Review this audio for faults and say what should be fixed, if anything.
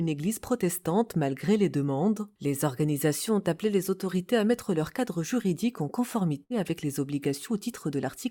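A burst of packet loss runs from 6.43 to 6.54 s. Consecutive packets arrived too late or not at all, so the receiver stretched the preceding sound for about 63 ms while fading it, and roughly 60 ms of material is skipped when playback resumes. A plain dropout would leave silence, but here the gap holds a decaying smear of the preceding sound. Forward error correction, packet interleaving or a deeper jitter buffer would help the stream ride out bursts like this.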